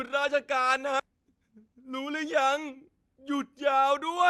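At 0.99 s a skip ahead drops roughly 0.7 s of speech and splices the two sides together with no gap, leaving an abrupt seam in the waveform and spectrogram.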